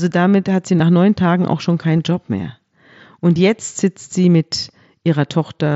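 It's a short speech clip with concealed Bluetooth headset packet loss: three tiny gaps patched by repeating the last bit of waveform, at 0.78 s right after "damit hat sie" (about 15 ms), 1.98 s after "auch schon", and 3.35 s just before "jetzt sitzt sie mit" (each about 7.5 ms). The two single-frame losses are nearly hidden, heard over the light graininess of the mSBC headset link.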